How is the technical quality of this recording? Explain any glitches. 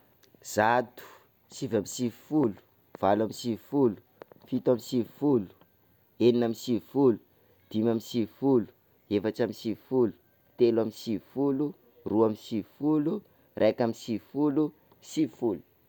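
The recording's technical quality is sound, with no glitches to explain: the signal stays steady and intact all the way through.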